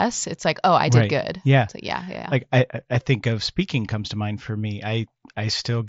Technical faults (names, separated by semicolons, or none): none